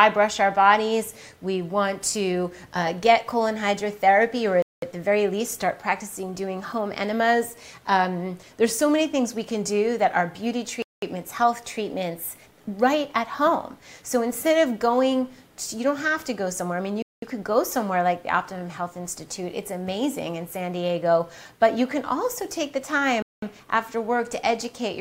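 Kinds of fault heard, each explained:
Gap between chunks: the audio was delivered in 6-second chunks, and each join left silence before the next chunk began. No sound is lost, but it cuts out abruptly for 200 ms at 4.62, 10.82, 17.02 and 23.22 seconds.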